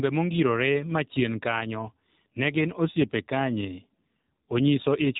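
From start to finish the speech sounds thin, boxy and plainly buzzy, with a synthetic edge and nothing above about 3.8 kHz. That is the AMR narrowband mobile codec: each frame is rebuilt from a vocal-tract model and sparse pulses, with a coarseness that fits a low mode near 7.4 kbps.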